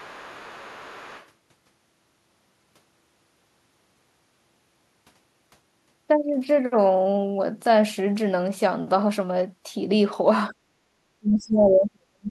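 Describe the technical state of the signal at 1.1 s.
At 1.1 s the other side's voice is leaking through, as it does from the start of the clip to 1.27 s. The far end's sound, played on the talker's loudspeaker, likely escaped the echo canceller and reaches the microphone as a faint second voice well below the main speech.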